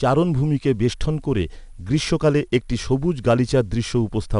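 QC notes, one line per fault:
throughout, 4-bit ADPCM compression: level-following gritty hiss on loud speech, distorted onsets where step size lags; unlike transform-codec warble; nothing above 10.6 kHz.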